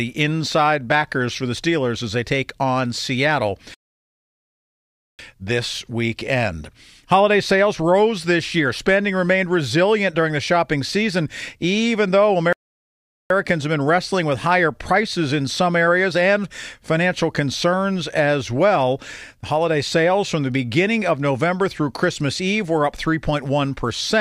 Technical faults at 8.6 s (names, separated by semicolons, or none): none